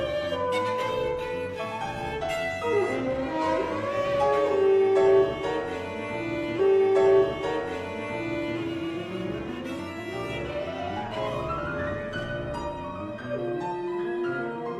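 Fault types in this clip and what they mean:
Stream segment repeated: the player queued the same chunk of the stream twice, so about 2.0 s of sound, from 6.55 s to 8.55 s, plays again after a small blip at the jump back. On a spectrogram or waveform, an identical two-second block appears back to back.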